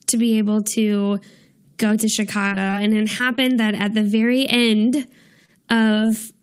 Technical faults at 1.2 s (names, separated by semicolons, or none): none